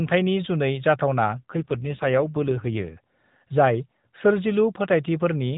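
From 1.40 s to 2.99 s the speech turns rougher and more synthetic, an AMR rate drop. The mobile codec, likely forced down by a weak radio link, fell from what sounds like 12.2 kbps to about 5.9 kbps. Bandwidth stays narrowband, with no gap.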